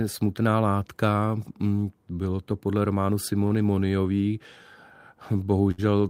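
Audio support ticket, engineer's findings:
Short stall from a late packet at 3.47–3.52 s (29 ms) and 5.71–5.80 s (68 ms). Jitter buffer underrun; speech stretched, nothing lost. Resumes in place, unlike packet loss, which skips ahead.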